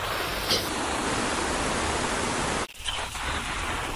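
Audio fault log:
0.69–3.95 s, wrong sample rate: From 0.69 s to the end, the speech plays slow and low. Speed drops to about 0.73 times normal, and pitch falls by about 5.5 semitones. Both shift together because the samples are read out more slowly than they were captured, with no conversion in between. Time stretches and every frequency drops by the same ratio. That ratio fits a 44.1 kHz recording played back at 32 kHz.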